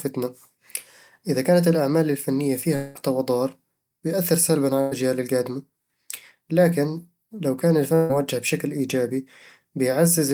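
From 2.75 to 2.97 s, after "إذا كانت الأعمال الفنية", the sound stalls into a fading smeared continuation before resuming at "ضار بتأثر سلبًا على", with about 200 ms absent. This is likely a long network dropout, where the receiver extended the last audio until delivery resumed.

Two bursts of packet loss follow, at 4.81 to 4.93 s just after "ضار بتأثر سلبًا على" and at 7.95 to 8.11 s between "لكن لو كان الفن" and "بشكل إيجابي". Each time, lost packets were covered by a decaying repeat of the preceding sound, dropping about 100 ms and 140 ms respectively.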